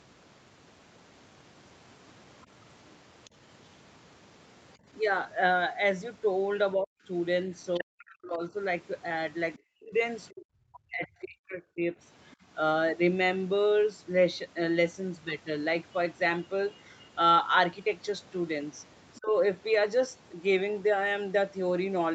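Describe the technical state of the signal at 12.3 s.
From 12.31 to 12.35 s, a very faint scrap of the other side's voice leaks through, likely residual echo the canceller missed. It shows as a weak smear far below the speech.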